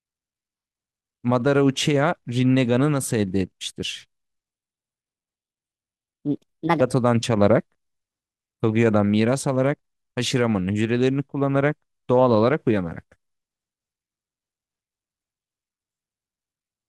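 A speech recording with a wrong sample rate from 4.50 to 6.81 s: the samples play back about 1.38 times too fast, consistent with 32 kHz material run at 44.1 kHz, so the voice turns hurried and rises about 5.5 semitones.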